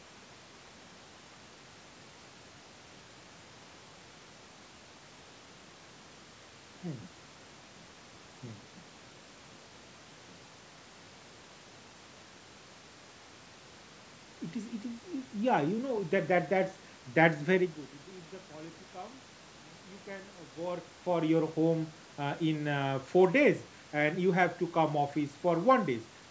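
No technical faults can be heard.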